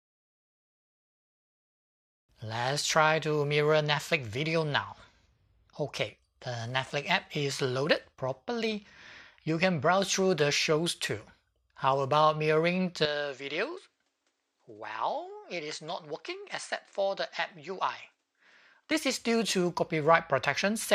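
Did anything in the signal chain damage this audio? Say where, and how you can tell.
Yes. From 13.05 to 18.91 s the top end disappears above 9.3 kHz, the level falls by about 5 dB, and a new, faint noise floor appears, with no gap at either edge. This is likely an input switched to a poorer device. Unlike a codec bandwidth drop, the change also brings its own noise and gain.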